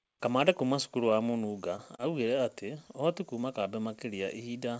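Short concealed packet loss occurs twice in this speech, at 1.76 to 1.80 s and again at 1.96 to 2.02 s. Each time about 20 ms of audio failed to arrive, and the receiver extended the preceding sound to cover the gap before fading back into real signal. The second patch runs longer, stretching timing by a few milliseconds. Both register as brief smeared wobbles over G.722 audio that carries nothing above 8 kHz.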